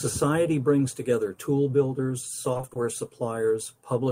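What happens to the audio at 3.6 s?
Nothing goes wrong at 3.6 s; the speech carries through that moment intact.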